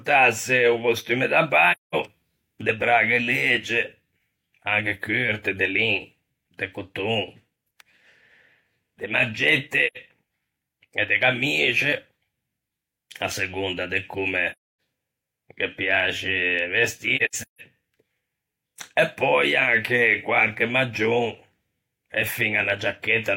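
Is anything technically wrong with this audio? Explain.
Yes. Soft-edged gaps at 1.72–1.95, 9.87–9.97, 14.52–14.62 and, scattered, 17.16–17.61 s (longest about 150 ms): AAC frame loss with muting, where lost frames decode as silence and overlapping windows fade out and in.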